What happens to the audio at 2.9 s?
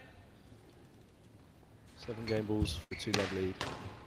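A burst of packet loss runs from 2.83 to 2.95 s. The receiver stretches the last sound for about 70 ms, fading it, then resumes later. On a spectrogram this shows as a smeared, decaying band ending in an abrupt jump.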